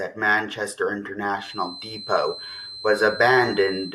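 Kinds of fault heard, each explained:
Feedback whistle: from 1.34 s to the end of the speech, a thin, steady tone near 4.1 kHz sits well below the voice, likely a loudspeaker-to-microphone loop held at the edge of feedback; its slow swelling and fading in level, unlike mains hum or a fixed test tone, sets it apart.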